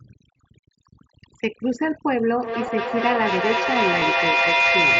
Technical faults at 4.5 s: overdone noise removal; feedback howl

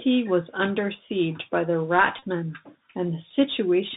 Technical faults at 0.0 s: Bluetooth CVSD headset codec

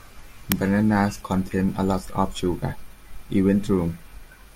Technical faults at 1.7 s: none

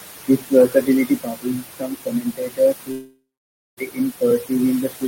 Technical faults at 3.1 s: noise suppressor artifacts; speech cut by the noise suppressor; long network dropout

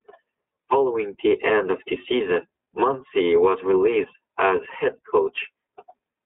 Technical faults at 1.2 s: iLBC codec

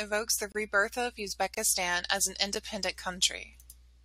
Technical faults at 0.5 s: gap between stream segments

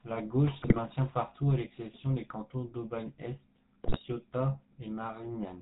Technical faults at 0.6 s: GSM full-rate codec; GSM bit errors

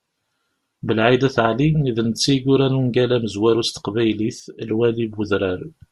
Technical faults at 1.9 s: none

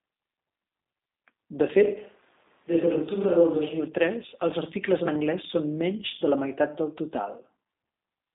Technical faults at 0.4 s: G.729 codec

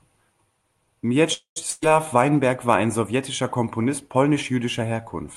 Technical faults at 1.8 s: burst of packet loss

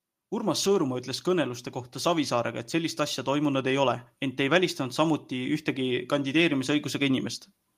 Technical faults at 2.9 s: automatic gain rising

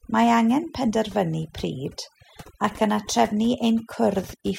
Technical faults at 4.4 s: overdone noise removal

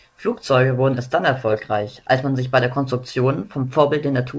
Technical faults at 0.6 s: none

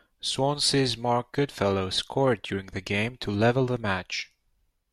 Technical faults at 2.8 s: none

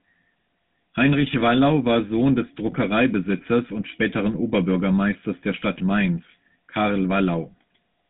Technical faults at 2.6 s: GSM full-rate codec

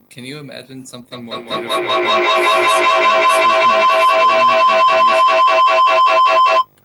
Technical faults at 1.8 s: video or display buzz; feedback howl

